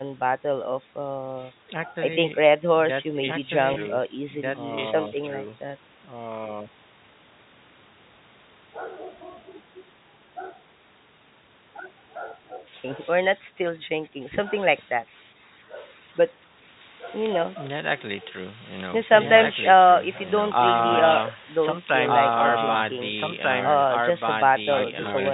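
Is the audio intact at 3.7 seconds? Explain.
No. From 3.74 to 3.76 s there is packet loss with pitch repetition. About 20 ms of audio, which fits a single lost packet, went missing, and the receiver bridged the gap by repeating the last pitch period instead of leaving a hole. Because the gap is so short, the concealment never fades to silence. It sounds like a brief, slightly held, buzzy sustain on the speech before normal audio resumes.

The doubled audio track runs throughout the clip, including this moment. A second full-band copy of the speech trails the original by about a second and a half, at roughly the same level. It carries no decay or room colouring, so it sounds like an overlapping duplicate rather than an echo. The likely cause is a second capture through a slower path, or an edit that left two copies out of step.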